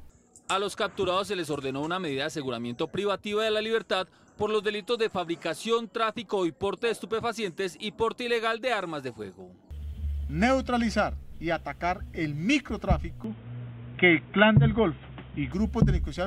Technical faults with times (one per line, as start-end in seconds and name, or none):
13.24-15.52 input switched to a poorer device